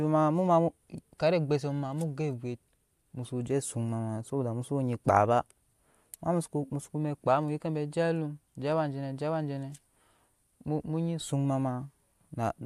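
Speech recording, and no technical faults can be heard anywhere in it.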